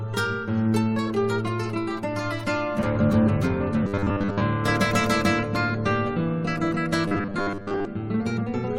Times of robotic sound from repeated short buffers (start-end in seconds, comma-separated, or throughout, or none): 3.84-4.43, 7.08-7.85